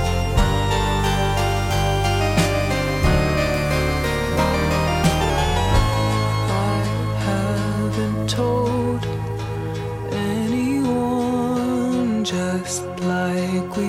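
Wrong sample rate from 5.30 s to the end: the audio abruptly drops in pitch by about 1.47 semitones and slows to 0.919 times its proper speed, with both shifting together by the same ratio. That coupling shows the samples are being played back at a lower rate than they were captured at, with no conversion. The 0.919 ratio fits 48 kHz material played at 44.1 kHz.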